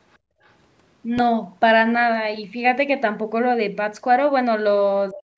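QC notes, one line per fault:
0.13–0.17 s and 0.44–0.52 s, other side's voice leaking through: Short scraps of a second voice sit faintly under the speech, roughly 40 dB below it. The likely cause is the far end's audio playing from the device's loudspeaker and reaching the microphone, with the echo canceller failing to subtract all of it. Because only residue survives the cancellation, the leak comes through as brief fragments rather than a continuous second talker.
0.19–0.41 s, background gated by the echo canceller: Between the two leaks, the canceller pulled the microphone down hard while it judged the loudspeaker to be active, cutting the room sound by about 28 dB at its deepest. The background drops away for around a fifth of a second and then returns when the gate releases. This creates an audible hole in the ambience instead of a steady floor.
1.19–1.21 s, loud pop: A single sharp pop rises roughly 10 dB above the surrounding signal. 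Its likely cause is a sudden voltage step or pulse entering the chain, such as a plug, switch, static discharge or driver glitch. The downstream circuitry shapes that pulse into a brief click-thump. The speech carries on underneath it without interruption.
5.11 s to the end, speech suppressed in double talk: In the final stretch, the talker's level falls away sharply, dropping by something like 40 dB at its deepest over about 300 ms. The likely cause is both sides speaking at once. Unable to tell its own talker from the loudspeaker echo, the canceller attenuated everything. As a result, the last syllables dip and break up rather than ending cleanly.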